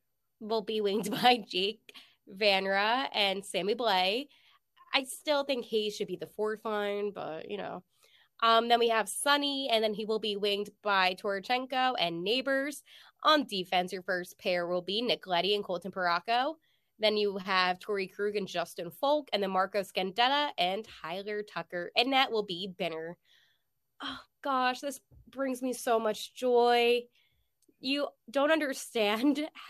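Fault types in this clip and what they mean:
No faults can be heard anywhere in this recording.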